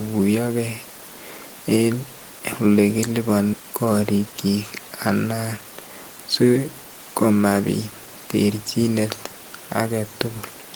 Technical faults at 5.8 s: jitter buffer speed-up

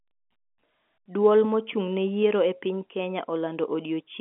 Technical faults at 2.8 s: none

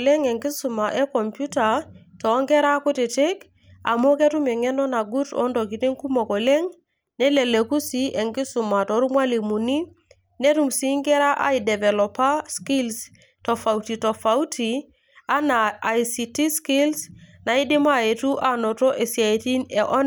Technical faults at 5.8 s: none

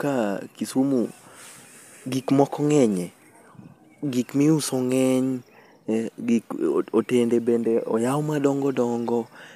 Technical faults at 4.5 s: none

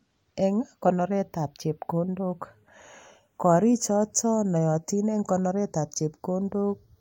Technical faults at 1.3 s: channels drifting apart

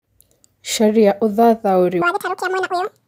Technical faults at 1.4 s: none

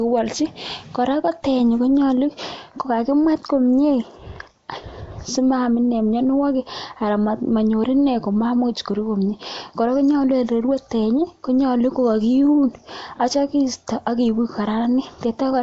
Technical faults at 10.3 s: Nellymoser compression

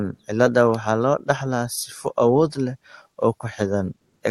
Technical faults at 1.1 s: none

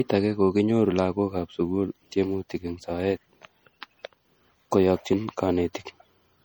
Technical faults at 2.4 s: MP3 compression

